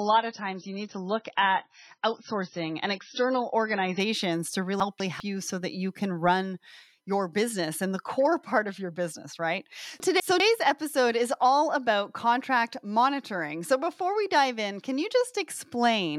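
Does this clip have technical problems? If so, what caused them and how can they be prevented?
Yes. For the first 4.0 s the speech is dull and smeary, with nothing above about 6 kHz, then it jumps to full brightness with no gap. That is an adaptive stream starting at a low bitrate: the player opened on a thin MP3 rendition, which fits roughly 18 kbit/s, and switched to one near 128 kbit/s once it had measured the connection. Unlike a dropout or buffering stall, nothing pauses; only the clarity changes. Holding a slightly higher starting rendition, or buffering briefly before playback, prevents it.

At 4.8 to 5.2 s, just before "you so that you", and again at 10.0 to 10.4 s, between "of your business right" and "episode is all about", the speech jumbles briefly. These are chunks out of order: a 200 ms block arrived one chunk late and played after its successor, leaving three hard joins each time. 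Unlike a dropout, no audio is missing; it is only swapped. Reordering chunks by sequence number before writing or playback prevents this.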